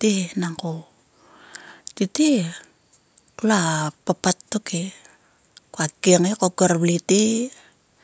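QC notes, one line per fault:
No faults heard in this speech recording.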